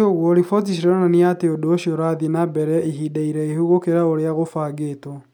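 There are no technical faults to describe, so there is nothing to place in time order.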